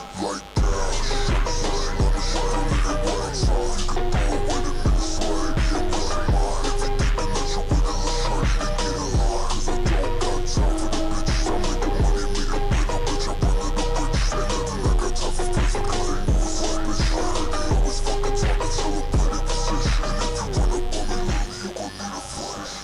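A steady, raspy buzz sits under the audio from start to finish, at roughly 20 dB below the programme level. This is mains buzz on a 50 Hz supply: a dimmer, rectifier or poorly shielded cable couples sharp switching spikes into the signal twice per mains cycle, so the interference carries a dense comb of 50 Hz harmonics that reach up into the kHz range and give it that edgy, buzzing rather than humming character.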